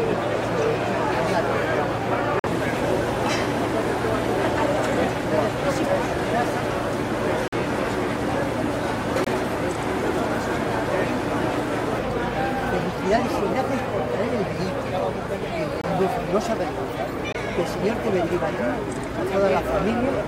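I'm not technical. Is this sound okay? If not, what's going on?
No. The sound cuts abruptly to silence five times, at 2.39, 7.48, 9.24, 15.81 and 17.32 seconds, each gap 40 to 60 ms long. This is a corrupt frame muted fault: damaged chunks of compressed data were rejected and replaced with silence, keeping the timing.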